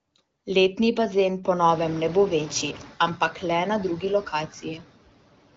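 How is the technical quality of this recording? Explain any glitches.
The recording is speech with one fault: noise suppressor artifacts running through the whole clip. The background noise in the room grows by about 22 dB around a second and a half in, ending roughly 17 dB below the voice, and the band stops near 7.6 kHz, which points to light wideband (AMR-WB) coding.

Throughout, the noise suppressor pulls down any band it judges to be steady noise, by about 18 dB, frame by frame. Between phrases the background drops away, then swells back under the voice. A spectrogram shows patchy, blinking noise speckles, and the waveform's floor pumps up and down.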